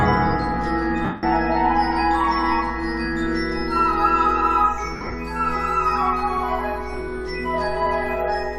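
At 1.05 to 1.23 s and again at 4.96 to 5.14 s, lost LE Audio frames let the decoder repeat the last spectrum with scrambled phase, so tones blur into hiss. The spectrogram shows smeared patches; the second gap breaks into shorter dropouts, the longest around 50 ms.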